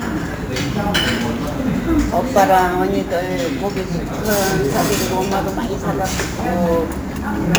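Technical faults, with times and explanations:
Throughout, crude rate conversion: a gritty, inharmonic fizz tracks the louder and brighter moments, consistent with upsampling from 32 kHz to 44.1 kHz by repeating the nearest sample without filtering. The periodic stepping error creates unrelated tones only about 20 dB beneath the sound.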